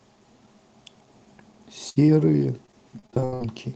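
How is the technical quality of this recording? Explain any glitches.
The quality takes a few clear hits from network trouble in the second half. The sound is capped around 8 kHz, which fits a wideband call codec like Opus at about 24 kbps, but the real problems are three packet-loss events.

From 1.89 to 1.98 s there's a burst of packet loss. Roughly 60 ms of audio never arrived, and the receiver covered it by stretching the last bit of sound for about 65 ms while fading it down. You hear a brief held buzz or fading hiss, then the speech picks up a little further along, with that chunk simply gone.

Right after, at 2.06 to 2.10 s, comes a short concealed packet loss, only about 20 ms missing. The decoder patched it by continuing the preceding sound and blending back into the real signal. It's quick, more of a small smear or wobble than a dropout, though a short consonant there could get swallowed.

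The worst stretch is 2.66 to 3.48 s: repeated packet loss with a robotic sound. Nine separate gaps land in under a second, the longest about 78 ms, adding up to roughly 300 ms lost. Each hole gets patched by extending the last sound, and about 37% of that span ends up synthesised rather than real. That's why it goes choppy, with bits of speech missing throughout.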